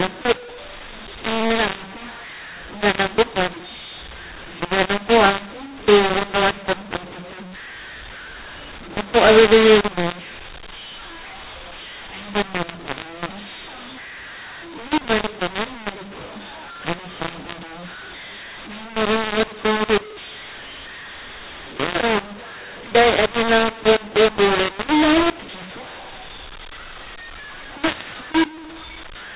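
From start to finish, the speech carries a mu-law and A-law mixup: samples encoded with G.711 A-law are being expanded with the mu-law curve, so levels come out scrambled. Speech sounds harsh and gritty, quiet passages are lifted into a noisy floor, and the band stays within the 4 kHz telephone limit.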